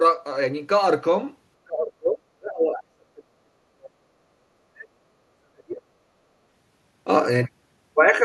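Speech suppressed in double talk from 1.65 to 5.14 s and again from 5.34 to 5.83 s: the speech dips hard, by up to about 40 dB, likely an echo canceller mistaking simultaneous talk for loudspeaker echo and attenuating both.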